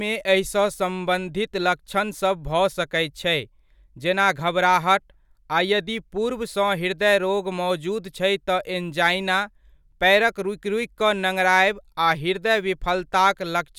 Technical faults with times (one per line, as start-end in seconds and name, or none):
none